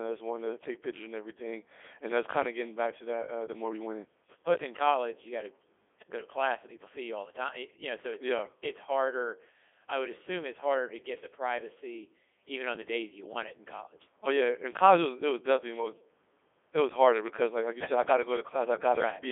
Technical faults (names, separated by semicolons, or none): Codec 2 vocoder